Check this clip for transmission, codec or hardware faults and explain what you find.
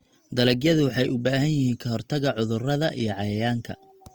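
One codec fault runs through the entire recording. Throughout, the speech sounds grainy and rough, with clean tones turned noisy, though the band still reaches about 20.2 kHz. The likely cause is Opus compression in its music mode, which fills bit-starved bands with noise or folded copies, consistent with roughly 24 kbps.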